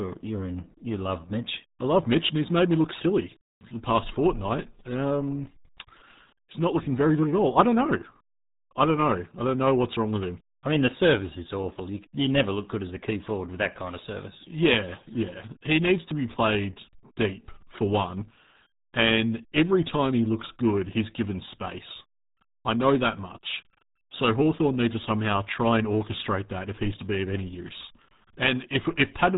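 Speech, coded throughout by the RealAudio 14.4 codec at what sounds like an 8 kbit/s dial-up rate, loses everything above 3.8 kHz and comes out heavily muffled and gargly.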